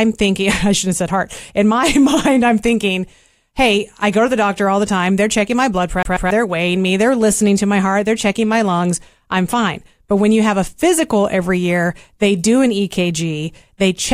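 Just after "checking my blood", at 6.03 s, the speech hits a CD stuck on one turn until 6.31 s: a scratch kicks the laser back a track, so a 0.14 s slice repeats twice with tiny mutes. The waveform shows identical blocks; the spectrogram shows repeated columns split by thin gaps.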